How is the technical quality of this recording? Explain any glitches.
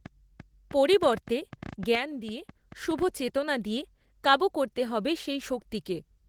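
The recording is compromised by three faults: lossy compression across the whole clip, plus a click train and a level drop in the first half.

Opus voice compression affects the full 6-second speech clip. The speech sounds muffled and hoarse, with a faint robotic edge. The band still extends to about 20.3 kHz, so the damage lies in coarse coding of the low-band excitation rather than in narrowing. Together with the texture, that points to hybrid mode at roughly 16 kbps in 20 ms frames, where a linear-prediction coder handles the range below 8 kHz and a transform layer covers the top. Unlike the click train, this damage is continuous and colours every sound.

A train of clicks runs from 0.06 s to 3.03 s, with roughly twenty sharp, similar ticks arriving at an uneven pace averaging about 6.75 per second. Peaks rise about 5 dB above the speech, and the ticks come through in pauses too. The likely cause is interference from nearby equipment or a faulty connection. 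Their similar shape and persistence through silence separate them from codec artefacts, which follow the signal.

A sudden gain jump drops the level by 6 dB at 1.95 s and restores it at 2.51 s. Speech and background noise fall and return together, with no fade at either edge, which is likely a digital gain change applied without a ramp. Because the noise floor moves along with the speech, this cannot be mistaken for the speaker simply getting quieter, and its half-second duration distinguishes it from the brief transient clicks.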